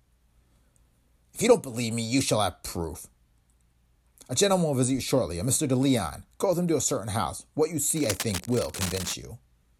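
A worn cable or connector, likely shifted around 7.96 s, produces cable scratch noise until 9.14 s: dense, uneven scratching about 10 dB below the speech.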